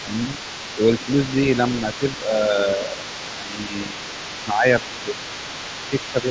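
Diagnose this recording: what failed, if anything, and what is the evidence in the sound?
A second, fainter voice runs underneath the speech from 0.00 to 2.28 s and again from 2.60 s to the end, sitting about 15 dB below it. This is the other side's voice leaking through, likely because the call processing's echo canceller left some loudspeaker pickup in the microphone signal.

The speech itself dips in level at 0.03–0.35 s, 0.75–1.08 s, 1.83–4.13 s, 4.44–4.66 s and 5.90–6.29 s, mostly by about 5 dB and by about 10 dB at 4.44 s. This is speech suppressed in double talk, likely the echo canceller turning down both voices while they overlap.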